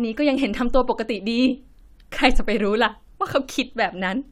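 Nothing here needs flagging: the speech runs along steadily with no dropouts, glitches or other technical trouble anywhere in it.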